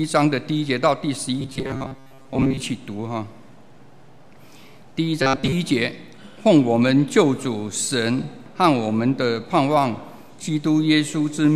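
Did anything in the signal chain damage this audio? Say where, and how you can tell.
Yes. There is robotic sound from repeated short buffers from 1.41 to 2.63 s and again from 5.22 to 5.53 s. In both stretches the sound turns into a rigid, metallic buzz pitched at 134 Hz, a repeat period of roughly 7.5 ms. The likely cause is at the driver or buffer stage: audio arrived too seldom, so the same short block was replayed to fill the gaps, replacing most of the real signal and imposing that fixed pitch.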